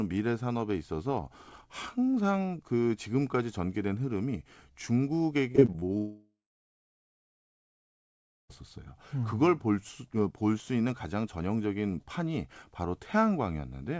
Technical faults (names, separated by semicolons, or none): repeated packet loss (robotic sound); long network dropout